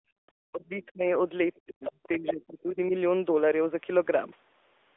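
Throughout, the speech sounds boxed-in and buzzy, with nothing above about 3.7 kHz; this is plainly audible AMR narrowband mobile codec damage, consistent with a mid-range AMR-NB rate near 10 kbps. From 1.84 to 2.08 s, a brief second voice sits well beneath the main speech, likely the other side's voice leaking through after incomplete echo cancellation.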